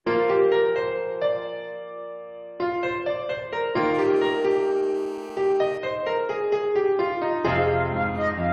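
From 3.94 s to 5.78 s a GSM phone buzz sits under the sound: a hard, raspy tone at about 217 Hz, dense with harmonics and unrelated to the programme. A 2G handset nearby is transmitting in bursts 217 times a second, and some stage of the audio circuit rectifies those radio pulses into the signal path. The buzz holds nearly steady, which points to a phone in an active call, and it sits about 19 dB below the signal.

At 5.88 s the continuous buzz gives way to GSM signalling bursts, running until 8.41 s. Instead of a solid tone there are even ticks with a longer 217 Hz buzz twice a second, far quieter than before, roughly 40 dB down. The handset is now sending only short groups of bursts, as a phone does mid-call when its user falls silent, and the circuit rectifies each group into a separate click or buzz.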